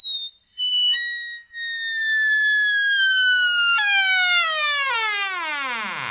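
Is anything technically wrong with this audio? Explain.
Yes, there are two problems, both heard through a narrowband call path whose spectrum stops at 4 kHz, which points to G.711 mu-law.

From 1.99 to 2.86 s there are scattered short gaps. About five packets went missing, each patched by extending the preceding sound, with roughly 50 ms filled in total and no single gap over about 15 ms. The result is brief ticks and tiny smears. On a waveform, look for brief stretches that repeat the previous cycle. On a spectrogram, look for thin vertical seams or smudged columns.

From 3.28 to 4.70 s a jitter buffer slow-down stretches the audio. To rebuild its reserve, the receiver repeated single pitch periods and slices of quiet, adding 75 ms and dropping playback to 95% speed with the pitch unchanged. The sound drags slightly and may warble a little. A waveform shows near-identical cycles copied back to back. 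A spectrogram shows harmonics running horizontally longer than they should, with no shift in frequency.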